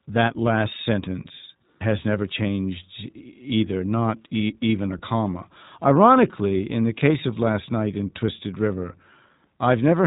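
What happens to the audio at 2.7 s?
At 2.7 s the speech is carrying iLBC codec damage, which runs through the whole clip rather than starting there. The codec codes each short frame's excitation on its own, without borrowing from the previous one, and the graininess suggests 20 ms frames in the 15.2 kbps mode. That independence makes the voice plainly rough and slightly synthetic, and the narrowband coding removes everything above 3.8 kHz, so the speech sounds boxed-in and dull.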